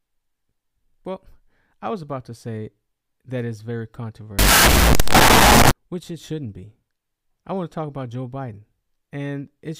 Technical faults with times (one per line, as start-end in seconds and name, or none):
4.39-5.71 wrong sample width